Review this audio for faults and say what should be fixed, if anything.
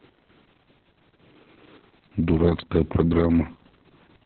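Opus voice compression runs throughout the speech. Nothing is present above about 4.3 kHz, pointing to narrowband SILK at a very low bitrate near 6 kb/s. The coarsely coded excitation makes the voice muffled, hoarse and faintly robotic. To prevent it, encode with a higher Opus bitrate so wideband or fullband coding is kept.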